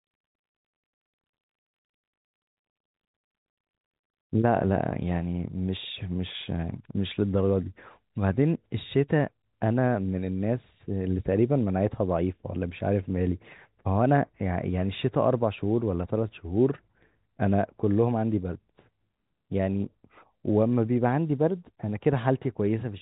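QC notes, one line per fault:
No faults were found in this speech clip. The G.711 telephone coding path works as expected, with the band stopping at about 3.8 kHz and any companding noise faint at most.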